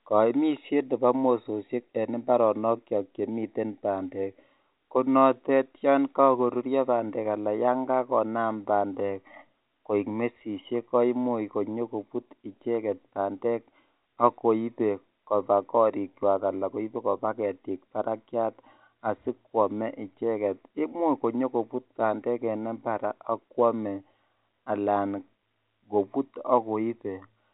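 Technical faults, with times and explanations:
24.64–24.66 s, packet loss with pitch repetition: about 20 ms of the stream failed to arrive, which fits a single lost 20 ms packet. The receiver filled the gap by repeating the last pitch period of the speech instead of leaving silence. Because the gap is so short, the concealment never fades into silence. It is heard as a brief held, slightly buzzy tone within the narrow telephone band of the G.711 coding.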